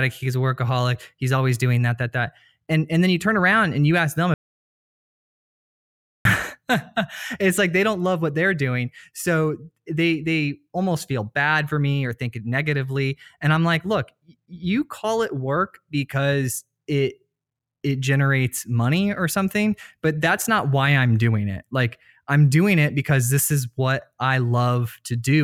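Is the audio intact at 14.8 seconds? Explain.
Yes, the audio is intact at 14.8 seconds, with no fault to be heard at that moment.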